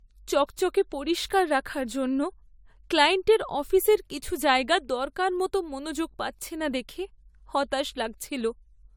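It's a speech clip with generation loss running the whole way through. The sound has a swirly, smeared, hollow quality, and consonant attacks come out soft and blurred. It's worse than a single decent lossy encode would give you, even though the top end still reaches up to about 20 kHz. That points to AAC-LC at around 96 kbit/s, likely decoded and re-encoded about three times, each pass re-quantising on a shifted frame grid so the damage stacks up.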